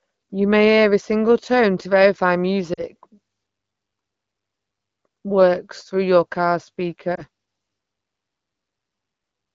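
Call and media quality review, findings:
Lost AMR speech frames, 2.73–2.84 s and 7.15–7.22 s: drop to near silence at first, brief dip or warble at second, weak onset after; decoder concealment repeating last good pitch and vocal tract settings at falling gain. Two-frame gap (40 ms) first, single frame (20 ms) second. Clear wideband AMR-WB speech around the gaps fits roughly 12.65 kbit/s.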